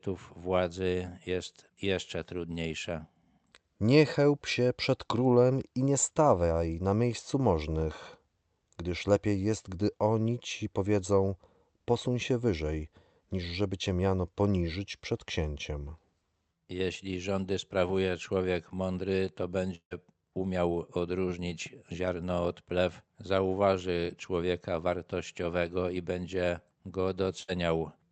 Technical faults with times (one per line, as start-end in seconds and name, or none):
19.75-19.93 long network dropout
27.43-27.50 burst of packet loss